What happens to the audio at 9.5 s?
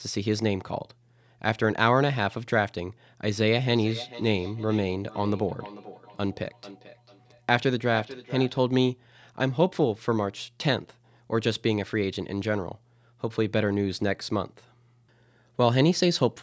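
At 9.5 s the speech carries on intact, with nothing going wrong at that point beyond the ordinary call microphone processing, which limits the band to below 8 kHz and trims the lowest bass.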